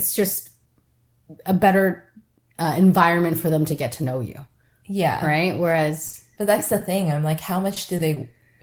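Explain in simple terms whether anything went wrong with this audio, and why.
Short concealed packet loss occurs four times: at 6.10 s just after "know you yeah right", from 6.35 to 6.53 s, at 7.96 s, and at 8.14 s after "i'm like how". Each time about 20 ms of speech never arrived, and the receiver filled the gap by continuing the previous sound, leaving a brief smear or wobble.

A short stall from a late packet occurs at 7.74 s, after "i'm like how". A packet arrived about 20 ms late, so the receiver held the last sound for that long and then resumed. Nothing is lost, but the sound briefly drags.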